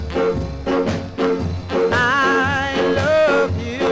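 No technical faults are audible.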